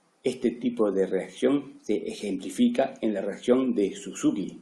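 No technical faults can be heard anywhere in this speech recording.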